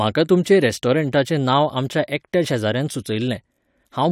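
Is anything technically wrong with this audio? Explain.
No, nothing technically wrong can be heard here.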